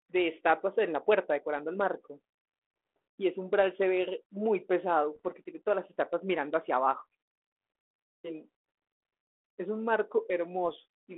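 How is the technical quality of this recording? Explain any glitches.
The speech comes through a narrow telephone band, roughly 300 Hz to 3.4 kHz, with the light graininess of G.726 ADPCM at a rate that fits 32 kbit/s. It is marred by two short glitches.

At 5.15 to 5.20 s, and again at 10.69 s, there are pops and rough, crackly bursts with brief jumps in level. These are bit errors on an ADPCM link. A small fraction of flipped bits throws off the decoder's step size and prediction, so each error keeps ringing for several milliseconds.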